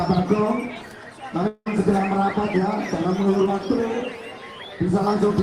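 A long network dropout runs from 1.47 to 1.68 s. The last sound is stretched into a fading buzz for about 180 ms, then about 40 ms of silence follows, and the audio resumes with 180 ms missing, likely because incoming packets stopped arriving.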